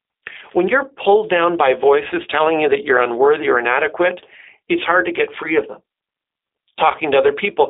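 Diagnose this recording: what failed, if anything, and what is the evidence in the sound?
The codec stage failed: the speech has been through a G.729 codec for its whole length. On a spectrogram it stops at a flat ceiling near 3.8 kHz, with little below 300 Hz. It sounds roughly synthetic, consistent with an 8 kbit/s model that rebuilds speech from a vocal-tract filter, pitch predictor and sparse pulses.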